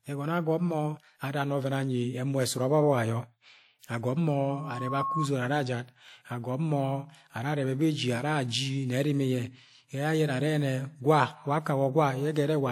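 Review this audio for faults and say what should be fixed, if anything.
Loudspeaker feedback squeal: the microphone picked up the loudspeaker it was feeding, and at about 1.1 kHz the loop gain went above one, so that frequency kept recirculating and growing on its own. From 4.50 to 5.28 s a single tone rises over roughly half a second to about the level of the speech, then stops. Lowering the gain or moving the microphone out of the loudspeaker's coverage, and notching 1.1 kHz, would prevent it.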